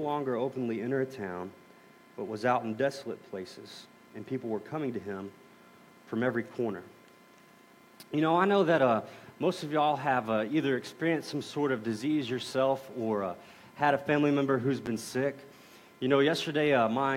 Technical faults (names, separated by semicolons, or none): loud pop